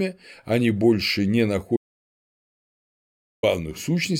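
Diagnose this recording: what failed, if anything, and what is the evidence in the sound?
Speech cuts off abruptly after "они больше не" at 1.77 s, leaving dead digital silence with no room tone until 3.43 s, so about 1.66 s is lost. This audio dropout to silence likely came from the input device or link failing while recording continued writing silence.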